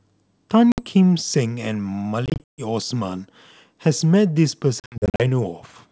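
Packet loss on an ADPCM call strikes at 0.72 s, from 2.26 to 2.62 s, and from 4.80 to 5.21 s. Each hole is hard-edged silence. Afterwards the decoder's predictor is out of step, so speech resumes slightly distorted.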